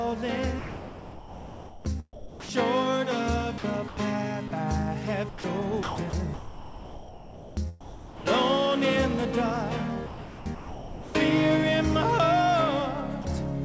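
The audio passed through a call path whose coding, which fits G.722, leaves nothing above 8 kHz, and it shows both sound chopped by the voice detector and sound dropped by the voice detector, likely from the sender's voice activity detection gating. Chopping occurs at 0.59–2.84 s (about 1.6 s replaced), 3.58–3.97 s (0.15 s), 5.29–8.70 s (about 2 s) and 10.07–11.15 s (about 1 s). On a spectrogram these look like real content alternating with smooth, featureless noise patches, and the waveform flickers between full activity and a low, even floor. Brief drops at 4.48–4.51 s and 13.22–13.25 s each swap 30 ms of sound for comfort noise, appearing as a thin flat-level gap.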